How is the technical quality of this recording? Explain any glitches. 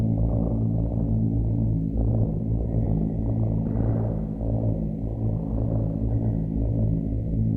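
The recording has one glitch, a skip ahead at 2.85 s. Roughly a second of sound was dropped while later audio was already queued, so playback jumps forward with no gap. A waveform or spectrogram shows an abrupt, seamless splice.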